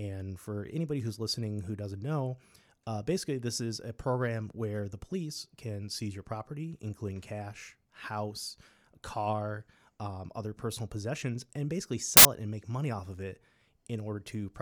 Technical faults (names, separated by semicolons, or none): samples built from the wrong bytes